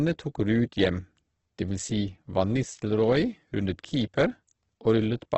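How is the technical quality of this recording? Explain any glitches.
The quality is heavily degraded throughout by what is likely Opus compression in its music mode at a rate around 12 kbps. Band energy is kept but filled with folded or noise content, so the speech sounds rough and grainy rather than swirly as MP3 would. Nothing remains above 8.2 kHz.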